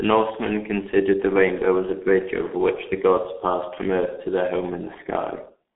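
From start to end, the speech carries heavy G.723.1 codec damage. Nothing reaches above 3.8 kHz, so it sounds muffled. The thin, hoarse texture and smeared consonants fit a very low rate near 6 kbit/s. The slowly updated voice model blurs quick changes.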